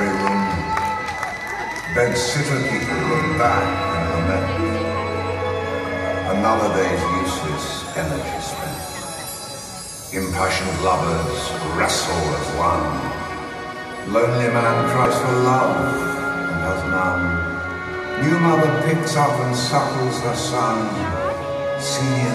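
The audio has one instance of damaged data in a compressed stream, a disruption lasting about 30 ms from 15.02 to 15.06 s. Corrupted bytes in the encoded frames there leave the decoder unable to read them correctly until it finds the next valid frame header and resumes.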